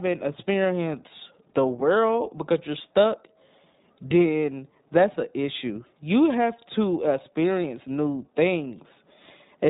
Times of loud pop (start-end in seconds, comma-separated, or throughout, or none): none